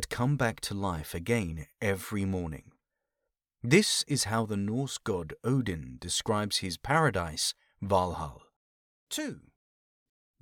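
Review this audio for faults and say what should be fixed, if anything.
Nothing in this audio needs fixing, as no technical fault can be heard anywhere in it. No change to the recording or its signal chain is called for.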